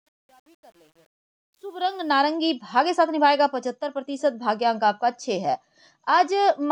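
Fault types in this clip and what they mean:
Truncation distortion on a fade: the fade-in drops low bits without dither, consistent with a 9-bit stage, so the quiet opening sounds gritty, worst before 1.71 s.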